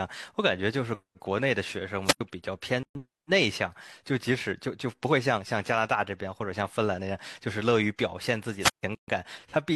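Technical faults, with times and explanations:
2.04–2.21 s and 8.60–8.83 s, wireless microphone squelch dropout: hiss rises, then near silence of 75 ms and 147 ms, as the fading radio signal trips the receiver's squelch.
2.83–2.95 s and 8.95–9.08 s, gap at a join of encoded pieces: sound drops out for 122 ms and 130 ms, recurring every 6 s, where separately encoded segments kept their start delay and end padding.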